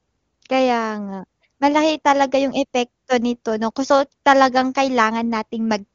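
Nothing stood out on listening to this speech recording, which has the band-limited character of an AMR wideband (HD Voice) call, with nothing above 7.2 kHz.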